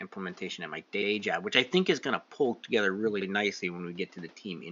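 Repeated frames at 1.01 to 1.09 s, just after "at my" and before "job which I think", and at 3.20 to 3.26 s, just after "going to pull together". Each time a short block of compressed frames was delivered twice, so the decoder plays the same slice again: about 78 ms the first time, which fits a run of three frames, and about 52 ms the second. It sounds like a brief stutter, and it stretches the clip by that amount. Room noise sits about 32 dB below the speech.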